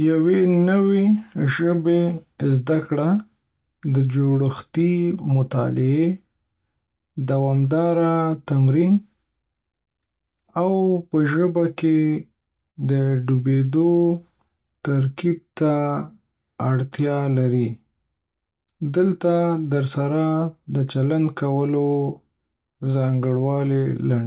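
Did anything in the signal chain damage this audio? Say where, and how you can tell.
Yes, the damage sits in the network and jitter-buffer stage of a call path. The band stops at 4 kHz, which points to G.711 mu-law at 64 kbps, but the buffer's timing corrections are what harm the speech.

Repeated stalls (stutter) run from 12.08 to 12.78 s, right after "او په ژبه کې". The jitter buffer ran dry four times, and each gap, the longest 42 ms, was filled by extending the last sound. Unlike packet loss, nothing is missing. The speech just catches and drags.

A jitter buffer slow-down follows from 13.36 to 15.82 s. The receiver repeated pitch periods to rebuild its reserve, adding about 139 ms so that speech runs at 95% speed. The pitch stays put, unlike a clock or tape slowdown, which would lower it.

A jitter buffer speed-up runs from 18.18 to 18.94 s, after "اړتیا لري". The buffer trimmed pitch periods, roughly a tenth of a second in total, to shed excess delay, and speech runs at 114% speed at unchanged pitch. 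It sounds hurried, not chopped as a dropout would.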